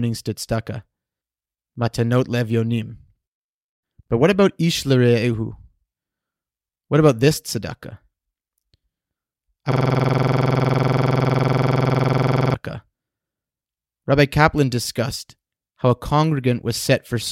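From 9.72 to 12.54 s, a system hang loop repeats one 46.44 ms slice of speech at 21.5 Hz. It sounds like a rapid, rattling stutter. This fits a frozen driver cycling a 2048-sample buffer.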